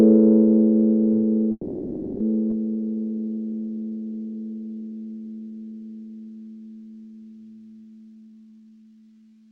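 There are four network-style faults in this audio, stacked fairly close together. First, a call audio freeze from 1.51 to 2.23 s: the sound hangs and the last bit gets stretched into a fading buzzy tail for about 0.69 s, dropping to a short silence of roughly 20 ms before the audio picks up exactly where it left off. Nothing is lost, but the whole stream now sits about 0.69 s later. That's likely packets stalling in transit and the jitter buffer running dry, with the receiver filling the hole itself. Right after, at 2.50 to 2.54 s, there's a skip ahead: playback jumps forward over something like 0.4 s of material, with only a tiny 10 ms seam where the two sides are butted together. That's what you get when a chunk is thrown away while later audio is already queued, whether it was dropped in transit or discarded by an overflowing buffer. Then from 2.77 to 5.73 s there's a jitter buffer slow-down. 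The audio runs at about 86% speed but keeps its pitch, so things sound drawn out, and 414 ms gets added along the way. The receiver is rebuilding its reserve by repeating single pitch periods or slivers of pauses over and over. Finally, from 8.15 s to the end there's a jitter buffer speed-up. It runs at about 143% speed at the same pitch and sounds rushed, with roughly 0.7 s trimmed out. Here the buffer is shedding excess delay by cutting short pieces of one or a few pitch periods, again and again.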